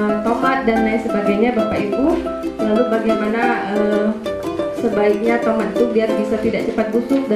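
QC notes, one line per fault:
Throughout: filter restarted on every block. The filter loses its memory between blocks and starts each from silence, so every block opens with a small transient. These repeat at 21.5 Hz as a tick-buzz that tracks the level, which fits a 2048-sample block.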